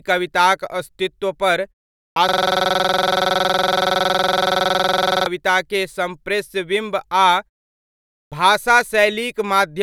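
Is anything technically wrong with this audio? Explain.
Yes. There are two faults.

The first is a clipped start after a pause, at 2.12 s and at 8.28 s. The output device dozes during silence, and waking it costs the opening of the next sound. At 2.12 s, after a 0.47 s pause, about 42 ms is lost. At 8.28 s, after 0.87 s, about 37 ms goes. Both onsets begin abruptly.

The second is a system hang loop, from 2.29 s to 5.27 s. The system stalled while the hardware kept replaying its ring buffer. One 46 ms slice repeats dozens of times, which fits a 2048-sample buffer. It makes a rapid stutter at 21.5 Hz, almost a buzz.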